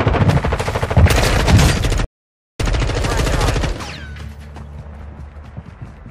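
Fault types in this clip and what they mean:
Stream reconnect: the connection dropped, so the player went silent from 2.05 s, reconnected and restarted decoding, resuming at 2.72 s about 0.14 s earlier, repeating that stretch. The waveform shows a 540 ms flat gap, then a brief faded onset; the spectrogram shows a blank vertical band.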